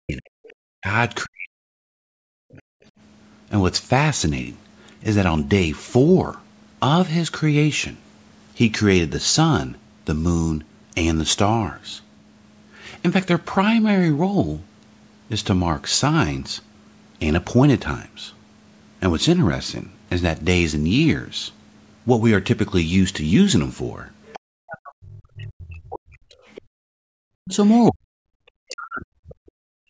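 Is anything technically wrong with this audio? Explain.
Yes, there are three kinds of echo-canceller trouble, mostly bunched near the start and the last few seconds.

Speech suppressed in double talk shows up from 0.0 to 2.62 s, 24.54 to 26.36 s, and 27.4 s to the end. The talker's level drops in pieces, by around 40 dB at worst, for roughly two seconds each time (closer to 1.5 s in the last stretch). The likely cause is the canceller mistaking the talker for loudspeaker echo while both sides were talking, and turning everything down.

The other side's voice is leaking through at 0.48 to 0.53 s, 24.26 to 24.39 s, 26.44 to 26.62 s, and 27.65 to 28.51 s. It comes through as short scraps, plus one longer stretch near the end, sitting roughly 20 to 30 dB under the talker. That's likely the far end's loudspeaker sound not fully removed from the mic.

The background is gated by the echo canceller from 26.64 to 27.12 s. 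The room sound drops by about 32 dB for about half a second and then comes back. The canceller clamped the mic down hard while the loudspeaker was playing.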